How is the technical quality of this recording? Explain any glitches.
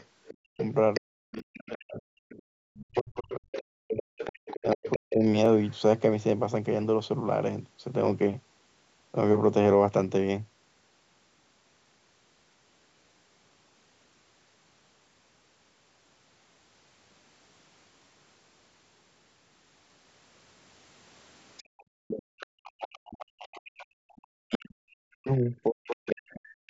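The recording has clear technical problems, mostly around echo control on a call, plus two tiny dropouts. The band stops at 8 kHz, as the call's microphone processing would leave it.

Other side's voice leaking through: From 0 to 5.76 s, 21.57 to 24.58 s, and 25.87 to 26.34 s, a second, quieter voice sits under the speech, about 15 dB down in the first two stretches and about 20 dB down in the last. It is likely loudspeaker echo the canceller failed to remove. On a spectrogram it shows as a faint second set of harmonics overlapping the main voice. In the waveform it appears as low-level activity in the gaps between phrases.

Speech suppressed in double talk: From 0.55 to 5.24 s, the main voice repeatedly ducks and thins, for around 3 seconds in total, with the deepest dips roughly 40 dB. From 22.74 s to the end it happens again with similar depth. This is likely the canceller turning everything down while both sides talk at once. 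On a waveform the envelope collapses in patches. On a spectrogram the upper harmonics vanish first, leaving holes mid-phrase.

Block of digital silence: At 1.39 s a 2.7 ms hole opens, which fits a 128-sample block. At 5.46 s a 0.7 ms hole appears, which fits a 32-sample block. In both places zeros were played, so the signal drops out with no fade. Each gap is heard as a small tick. In the waveform it is a flat line with abrupt edges. On a spectrogram it is a thin vertical broadband stripe.

Background gated by the echo canceller: From 21.63 to 22.38 s, the room sound drops away for about 0.7 s, as much as 40 dB. The canceller clamped the microphone while the loudspeaker played, then released it. The noise floor disappears and returns, which sounds like brief dead air. A spectrogram shows the background haze going black across all frequencies. The waveform's low-level noise flattens for that span.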